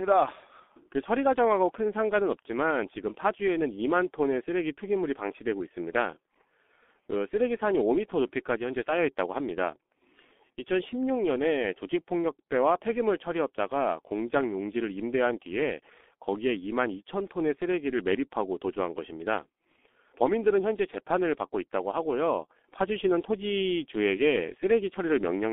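From start to finish the speech sounds muffled, hoarse and boxy, with smeared consonants and nothing above about 3.5 kHz or below 250 Hz. This is G.723.1 codec damage: heavy low-rate coding, fitting roughly 6.3 kbit/s, with coarse 30 ms frames blurring fast detail.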